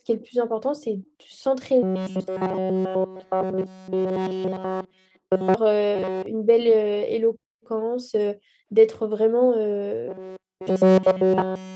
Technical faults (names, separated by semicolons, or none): echo leak; robotic sound from repeated short buffers